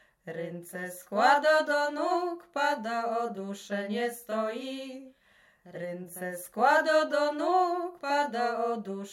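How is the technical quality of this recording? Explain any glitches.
No audible glitches or faults.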